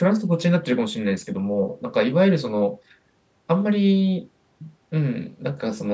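Nothing here counts as a technical fault: the speech has simply been through a call's microphone processing, so the very lowest bass is trimmed away and nothing reaches above 8 kHz, which is just how that kind of path is meant to behave.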